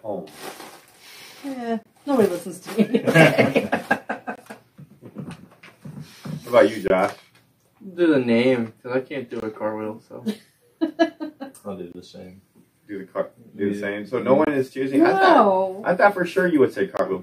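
There's a gap between chunks at 1.83, 4.36, 6.88, 9.40, 11.92, 14.45 and 16.97 s. Each is a hole of about 23 ms, recurring every 2.5 s of audio, where silence is left at each join before the sound resumes. Nothing's missing, just interrupted.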